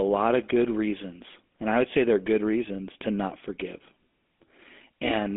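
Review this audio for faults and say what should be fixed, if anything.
GSM full-rate codec damage runs throughout the speech, with a plainly audible buzzy, gravelly roughness. The codec rebuilds the voice from a vocal-tract model driven by coarse pulse excitation, which fits a 13 kbps stream, and the band is confined to roughly 200 Hz to 3.6 kHz. To prevent it, record or route the audio over a wideband path rather than a GSM full-rate link.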